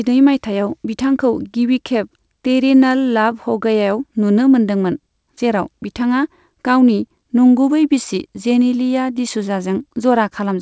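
No technical faults are audible anywhere in this recording.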